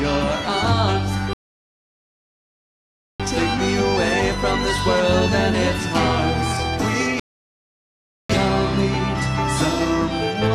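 Rebuffering stalls at 1.33 s to 3.20 s and 7.20 s to 8.30 s. Playback ran dry, fell silent, then resumed exactly where it stopped. Nothing is lost, but about 1.9 s and 1.1 s are added.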